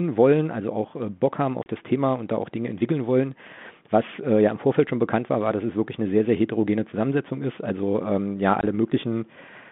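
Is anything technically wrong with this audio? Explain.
Yes. Packet loss on an ADPCM call at 1.63 s (30 ms) and 8.61 s (20 ms): silence-filled gaps desynchronise the decoder's predictor and step size, so the speech returns slightly distorted before settling. The band-limited telephone sound fits 32 kbit/s G.726.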